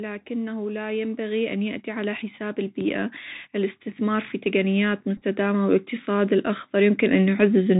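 From the start, the speech carries Bluetooth CVSD headset codec damage, and it is plainly audible. The sound points to the 64 kbps CVSD link. Each sample is one up-or-down bit with an adapting step. Nothing above 4 kHz survives. S sounds turn scratchy, and a granular hiss sits underneath.

From 0.27 s to 7.75 s, the automatic gain keeps rising. The control judged the input too quiet and raised its gain slowly. It climbs by about 13 dB overall. Speech and background swell together.

Between 5.17 s and 5.22 s, a Bluetooth headset packet is repeated several times. Packets were lost, and the chip replayed the previous packet's bits. About 22.5 ms went missing across 45 ms, which fits roughly six 3.75 ms packets. The runs are short, so this comes through as brief, small ticks rather than a steady buzz.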